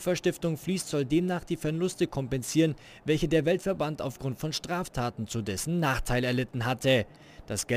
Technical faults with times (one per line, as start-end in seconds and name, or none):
0.00-7.77 crude rate conversion